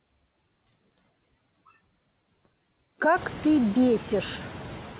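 Noise suppressor artifacts run through the whole clip. The suppressor treats the steady room noise as something to remove. It pulls that noise down by about 15 dB between phrases, then lets it return under the speech. The dipping grows clearer once the room noise climbs, at roughly 3 s. The call path carries nothing above 4 kHz.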